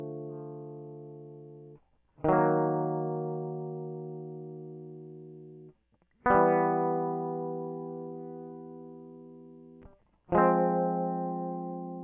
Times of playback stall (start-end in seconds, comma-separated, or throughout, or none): none